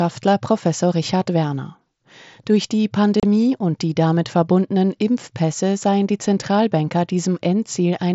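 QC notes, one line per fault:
3.20 to 3.23 s, unconcealed Bluetooth headset packet loss. About 30 ms of speech drops out in one short hole with abrupt edges. Voice packets between headset and phone went missing, and nothing filled the gap. The signal falls straight to silence or an idle pattern and returns just as suddenly. The gap length fits about four lost frames on the mSBC wideband headset link.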